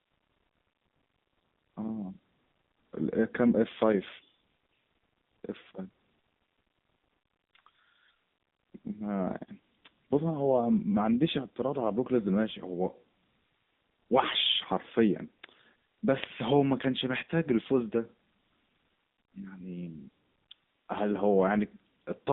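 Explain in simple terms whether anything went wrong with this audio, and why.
The speech passed through the AMR narrowband mobile codec, an old-style phone compressor that squeezes the sound hard. For the whole clip, everything above about 3.7 kHz is gone, so the voice sounds muffled and phone-like, with a clearly audible buzzy, synthetic edge.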